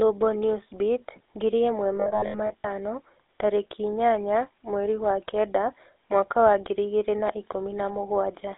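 Throughout, the speech carries a buzzy, gravelly GSM full-rate codec roughness, which fits 13 kbps; a spectrogram shows energy confined between 300 Hz and 3.7 kHz, with a hard ceiling.

From 1.96 to 2.71 s, lost GSM frames scattered across the 0.75 s span, the longest gap around 70 ms, leave repeated, metallic-ringing patches. These appear as smeared, frozen spectral columns and held waveform segments.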